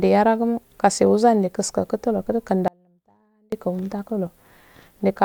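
At 2.68 s the speech cuts out abruptly in an audio dropout to a faint residue, returning at 3.52 s after about 0.84 s. The gap is not silent: a faint residue remains, roughly 35 dB below normal level. The abrupt edges rule out a natural pause or fade. The likely cause is a break in the wanted signal while the path downstream stayed live, passing only that weak residue.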